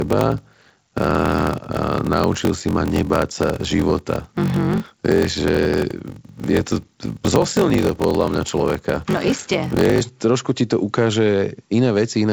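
From 0.0 to 10.02 s, up to "trošku ti to ukáže", the speech carries a block size mismatch (padded): one stage hands over shorter blocks than the next reads, fitting 1024-sample reads, and each block's remainder is zero-filled. The regular gaps make a steady 46.9 Hz buzz, and the speech runs at 0.861 times normal speed. Unlike a resampling-rate error, the pitch stays about normal, and unlike underrun dropouts, the gaps are perfectly periodic.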